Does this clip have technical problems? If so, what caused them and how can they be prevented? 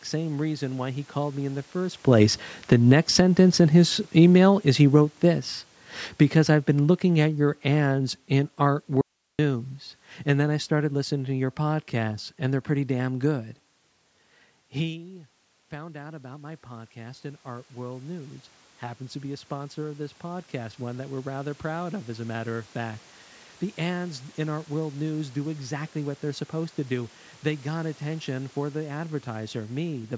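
Yes. Automatic gain falling runs from 2.57 to 5.55 s, just after "in the first place", and again from 6.35 to 9.59 s. The talker moves closer around 2.0 s, the louder input pushes the gain control to pull its level down by about 6 dB and then about 5 dB, and the voice sinks together with the room noise behind it. Preventing this means setting the input gain so that normal movement stays below the gain control's threshold, or using a slower or more limited gain control.

An audio dropout to a faint residue occurs from 9.01 to 9.39 s. For about 377 ms the voice cuts out abruptly and only hiss remains, far below the speech level. The likely cause is a brief loss of the signal upstream, such as a connection or transport glitch, while the path after the break stayed live. A more stable link with packet-loss concealment would prevent or mask it.

Automatic gain rising runs from 14.89 to 23.05 s. 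The talker moves away around 14.5 s, so the input drops by about 16 dB. Over roughly eight seconds the gain control raises its level by about 11 dB, and voice and background swell up together. Keeping a steady distance from the microphone, or capping how far the gain control can rise, would prevent it.

The call microphone processing leaves nothing above 8 kHz.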